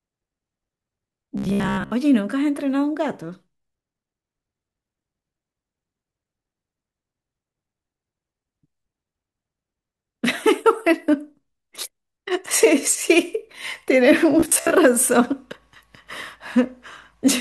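Robotic sound from repeated short buffers appears from 1.38 to 1.91 s and again from 14.40 to 14.71 s. In both stretches the speech collapses into a rigid, metallic buzz at 66.7 Hz that only loosely follows the syllables. The likely cause is audio arriving too seldom, so a 15 ms fragment is replayed over and over in place of most of the real signal. That steady repetition rate imposes the fixed pitch.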